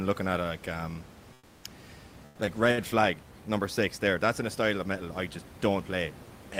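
From 1.33 to 1.63 s, just after "looking at like um", the room background gives way to a smooth, featureless hiss about 6 dB quieter. This is comfort noise in place of the background, likely from discontinuous transmission muting the sender during the pause.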